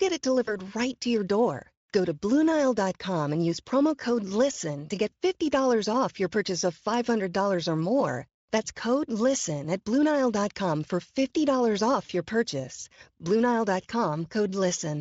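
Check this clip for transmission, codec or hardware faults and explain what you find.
Two dropouts of the same kind are audible, with Speex-coded speech carrying through clean.

VoIP packet loss concealed by the speech codec occurs at 0.45 to 0.56 s, just before "right to your door", and at 12.05 to 12.12 s, just before "your purchase". Packets went missing, about 20 ms the first time and 40 ms the second, and the decoder filled each gap by extending its last pitch and filter with gain stepping down frame by frame. The sound smears into a fading buzzy or noisy tail, and because each frame builds on the previous one, the audio stays weak or distorted briefly after packets resume.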